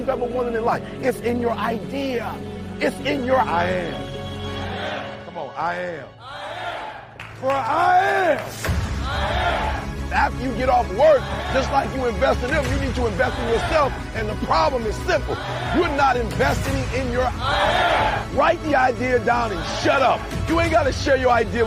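No technical faults are audible.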